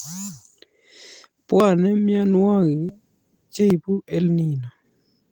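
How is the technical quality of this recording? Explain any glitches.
The speech has three brief skips. Dropped buffer (overrun) at 1.60, 2.89 and 3.70 s: samples were likely overwritten before being read, so the sound jumps ahead by roughly 40, 20 and 10 ms, heard as jumps in the sound.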